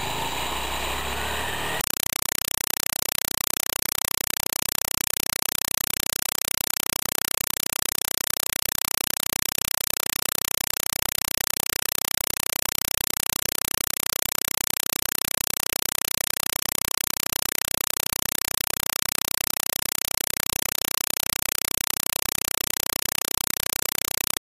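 From 1.81 s to the end, the sound is replaced by a compressed stream played as audio: a Dolby Digital (AC-3) bitstream, here pointing to about 192 kbps, is treated as plain samples instead of being decoded. Each frame becomes a 4 ms burst of noise followed by zero padding, repeating 31.25 times a second. Unlike broadband hiss or clipping distortion, it is a very loud, regular chattering static with silent gaps.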